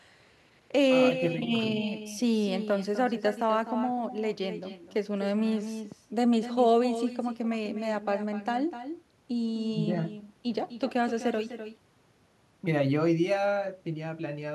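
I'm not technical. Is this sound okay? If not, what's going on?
No. Throughout the recording you can hear echo with no canceller: each bit of speech returns about a third of a second later as a quieter, thinner copy. Unlike room reverberation, which blurs sound smoothly, this is a distinct repeat, like someone echoing the talker.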